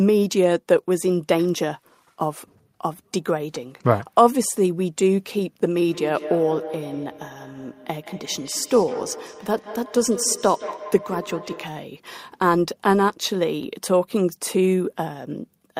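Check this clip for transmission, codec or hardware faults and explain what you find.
One fault: from 5.84 to 11.83 s, feedback echo between two devices. A second device replays this microphone's signal, which is picked up again, so the sound returns roughly every 150 ms, at most about 13 dB below the speech. Each return is thinner and more ringing, unlike smooth room reverberation.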